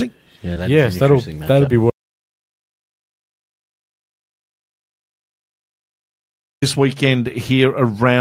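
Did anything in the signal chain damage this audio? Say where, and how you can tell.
Yes. An audio dropout to silence runs from 1.90 s to 6.62 s, removing about 4.7 s of speech. The gap is silent with no room tone, unlike a natural pause, so the input device or link likely dropped while the recorder kept writing silence.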